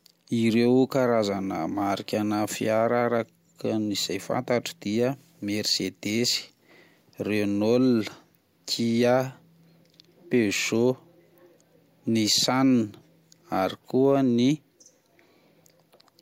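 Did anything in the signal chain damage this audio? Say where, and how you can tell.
No, nothing in the signal chain damaged this audio.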